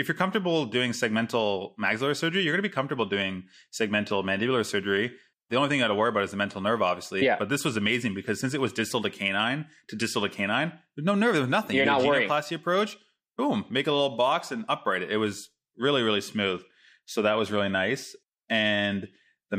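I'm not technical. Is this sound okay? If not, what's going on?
Yes, nothing stood out as a problem when I listened to this recording.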